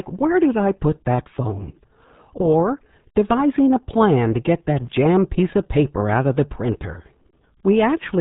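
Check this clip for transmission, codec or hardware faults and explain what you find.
The clip has one fault, present throughout: RealAudio 14.4 codec damage. The whole speech track is squeezed through a very low-rate codec, and the damage is heavy.

RealAudio 14.4 codec, whole clip: a modem-era speech coder discards everything above 3.8 kHz, which fits roughly 8 kbit/s, leaving muffled, gargly speech. A spectrogram shows a hard ceiling at 3.8 kHz with smeared, blotchy energy below it.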